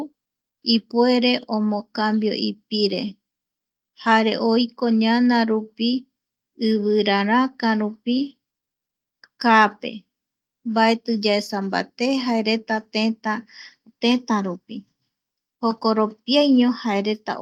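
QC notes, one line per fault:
No faults heard in this speech recording. Nothing here needs a note or a fix.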